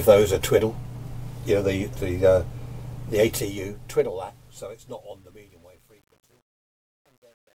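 From 3.04 s to the end, the fade shows truncation distortion: the gain stage keeps too few bits without dither, which fits about 10-bit resolution. From 4.18 s it turns gritty. Unlike added dither, the grit follows the signal rather than forming a steady hiss.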